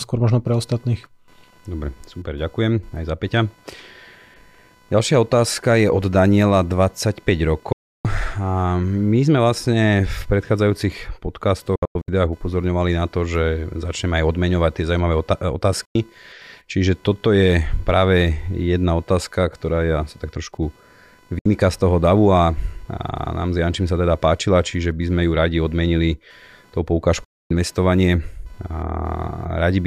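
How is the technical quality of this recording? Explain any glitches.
The speech is affected by two faults: a computer-related buzz throughout, and five digital broadcast dropouts.

Computer activity noise runs through the whole recording as a buzzing pulse at around 500 Hz, roughly 35 dB below the speech. Processor or peripheral load currents modulate the ground shared with the audio circuitry, so the buzz follows machine activity rather than the speech.

Digital broadcast dropouts occur at 7.72–8.05 s, 11.76–12.08 s, 15.85–15.95 s, 21.39–21.46 s (just before "z toho davu") and 27.24–27.51 s (just after "odmenili tou"). The receiver lost valid frames and muted with a roughly 3 ms fade until good data returned. The gap at 11.76 s is split into several short holes, the longest 96 ms. Lost audio ranges from 64 to 320 ms, consistent with roughly 32 ms frames.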